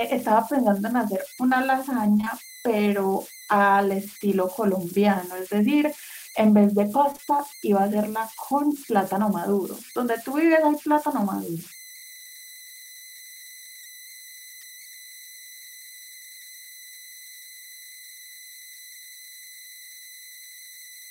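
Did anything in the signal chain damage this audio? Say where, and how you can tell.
Yes. At the converter stage, converter idle tones run through the whole clip: an undithered delta-sigma converter settles into repeating bit patterns on quiet input, leaving a whistle around 2 kHz, about 21 dB below the speech. A spectrogram shows a thin steady horizontal line there, clearest in pauses.

On the network, short concealed packet loss hits 2.17–2.28 s and 7.12–7.20 s. Audio stopped arriving in chunks that fit consecutive 20 ms frames, and the receiver extrapolated the last sound to cover them, so each run is a brief smear.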